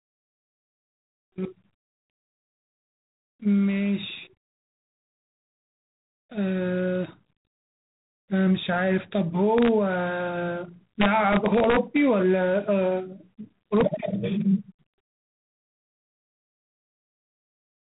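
G.726 ADPCM coding runs through the whole speech clip. Each sample is sent as a coarse difference from an adaptive prediction. The heavy quantisation leaves a plainly audible harsh, rasping hiss that swells and fades with the speech level, which fits the 24 kbit/s rate. Nothing above 3.8 kHz survives, so the sound is narrow and muffled like a telephone line.

Integer overflow strikes three times: from 9.58 to 9.69 s, from 11.01 to 11.97 s, and at 13.77 to 13.81 s. The later two push about 2 dB past the limit. Loud peaks exceed the largest value the integer format can hold and wrap to the opposite sign instead of being limited. Each wrap flings the waveform across its full range, producing violent cracks far sharper than ordinary clipping, most sustained in the long middle stretch.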